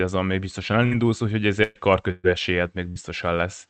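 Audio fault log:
0.85–0.94 s, 1.63–1.78 s, 2.11–2.27 s, 2.90–2.98 s: burst of packet loss, the first right after "még biztosan". Held, fading sound bridges each gap, then speech skips ahead about 60 ms (120 ms in the middle two).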